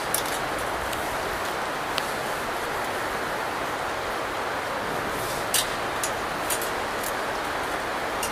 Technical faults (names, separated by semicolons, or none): audio missing between chunks